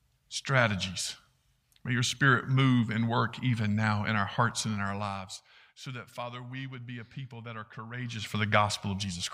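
No technical faults can be heard anywhere in this speech recording. The level shifts smoothly where it moves, gliding up or down like a fader rather than jumping.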